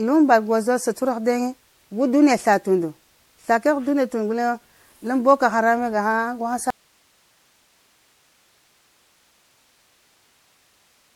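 Throughout, the speech sounds swirly, hollow and smeared, with blurred attacks and nothing above 16.5 kHz: generation loss, likely from about seven passes through MP3 near 64 kbit/s. At 6.70 s the signal cuts out abruptly and never returns, an audio dropout to a faint residue, leaving only hiss about 40 dB down, likely a lost feed into a still-live path.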